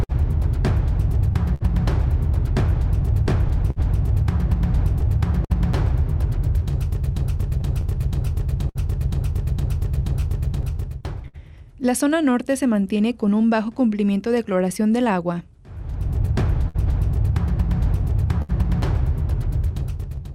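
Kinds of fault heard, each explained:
Clock drift between sender and receiver: The sender's clock runs roughly five percent slow, so small timing hiccups recur unevenly through the whole clip rather than clustering like packet loss.
Scattered short gaps: Brief smears, each at most about 70 ms, appear where lost packets were patched by continuing the last sound. They cluster in three stretches, unlike drift's recurrence all through the clip.
Repeated timing corrections: From 1.12 s to 20.33 s the receiver repeatedly lengthens the audio, adding about 300 ms in total. This is a gradual stretching rather than the isolated smears of lost packets.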